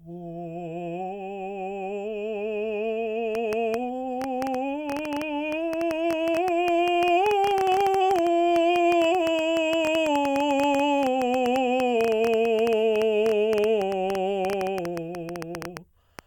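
Something outside the signal path, likely interference from nearby equipment or a faulty connection or power supply, begins injecting short pulses into the music at 3.35 s and keeps doing so until 16.20 s. The result is a train of clicks, about a hundred in all, arriving at roughly 9.1 per second with uneven spacing. Each click has much the same sharp shape and stands out well above the music, heard as an irregular ticking or popping laid over it.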